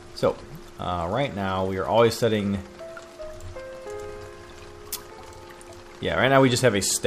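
Nothing goes wrong anywhere in this audio, with no technical faults turning up at any point.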